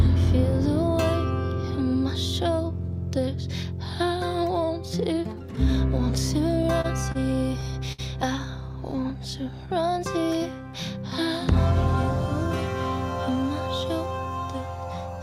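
From 6.51 to 7.17 s the audio drags and stutters, catching four times as the last sound is held on. These are repeated stalls (stutter): packets kept arriving late, the jitter buffer ran dry each time, and the receiver bridged about 75 ms in total, the longest gap 30 ms, with nothing lost.

Between 7.92 and 8.00 s one sound hangs on too long, held for about 60 ms before the audio resumes where it left off. This is a short stall from a late packet: the buffer emptied, the receiver stretched what it had, and its delay grew by 60 ms.

From 8.96 to 9.68 s the audio slows to 93% speed while keeping its pitch, so sounds are drawn out. This jitter buffer slow-down came from the receiver repeating single pitch periods or slices of pauses, adding 59 ms to rebuild its reserve.

From 13.29 to 14.27 s the audio runs at 107% speed with unchanged pitch and sounds hurried. This is a jitter buffer speed-up: holding more audio than it aimed for, the receiver cut short pieces of one or a few pitch periods, around 70 ms in all.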